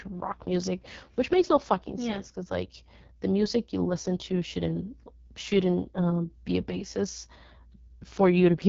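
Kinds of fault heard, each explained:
AMR wideband (HD Voice) codec: The speech sounds rough and raspy throughout, with nothing above about 7.1 kHz. This points to AMR-WB at its lowest rate, around 6.6 kbit/s, where the pulse-driven vocal tract model is coded too coarsely.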